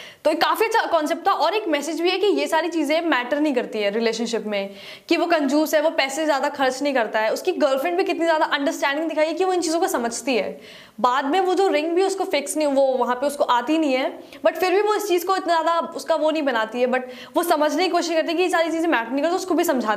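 No technical faults are audible anywhere in this recording.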